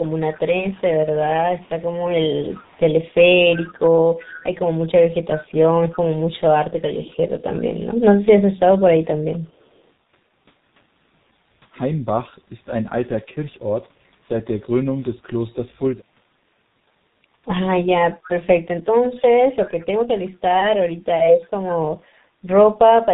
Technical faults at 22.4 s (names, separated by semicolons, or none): G.723.1 codec